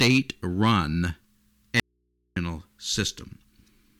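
Audio dropout to a faint residue, from 1.80 to 2.36 s in this speech clip: the signal cuts out abruptly for about 0.57 s and the gap holds only low mains hum, roughly 50 dB below the normal level, before the speech snaps back mid-flow. The hum shows the path stayed live after the break, so the likely cause is a brief loss of the source feeding an open input, not a pause or fade.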